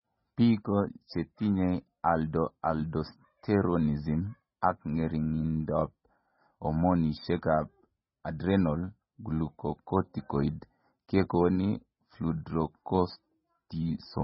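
Speech throughout carries heavy codec damage: nothing sounds above 5.6 kHz, and the voice has a watery, swirling quality with smeared onsets. That is likely MP3 compression at a very low bitrate, around 16 kbps. A spectrogram would show a hard flat ceiling at 5.6 kHz and patchy, flickering blocks below it.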